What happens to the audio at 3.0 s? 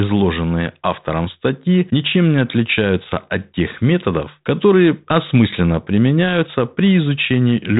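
Nothing goes wrong at 3.0 s: the audio is intact there, carried through the G.726 ADPCM telephone path with its usual band limit, so the sound stops at about 3.8 kHz.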